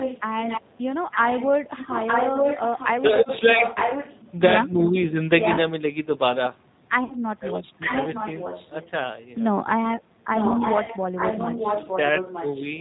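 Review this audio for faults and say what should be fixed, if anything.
Throughout, the G.729 codec's damage is plainly audible. The speech sounds rough and slightly synthetic, as the decoder rebuilds it from a vocal tract filter, a pitch predictor and a few pulses per frame. On a spectrogram, energy stops sharply at 4 kHz and the harmonics look smeared. Carrying the call over a wideband codec would prevent this.

A second, delayed copy of the speech trails the original by about 0.91 s at 0.0–0.64 s (about 10 dB down) and at 1.11–4.33 s and 10.36–12.66 s (about 5 dB down). Likely cause: an echo leak, where a far-end loudspeaker fed a microphone whose echo canceller failed to remove it. A spectrogram would show shifted repeats of each syllable. Using a headset or fixing the echo cancellation at that end would stop it.

VoIP packet loss concealed by the speech codec occurs at 7.04–7.15 s, a 60 ms gap that fits three 20 ms packets, and at 10.84–10.92 s, a 40 ms gap. 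The decoder extended its last pitch and filter into a fading buzzy tone or coloured noise, and the sound stays weak briefly after each gap. A waveform would show smooth decaying stretches replacing the speech detail. A more reliable network path or forward error correction would reduce these dropouts.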